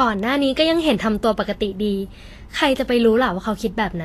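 Throughout the speech, the treble is hissy and grainy, with nothing above 14.2 kHz. This is likely Vorbis compression at a low setting, which fits a bitrate near 35 kbps. Fine high detail is coarsely quantised into noise. Tones sound rough and attacks blurred.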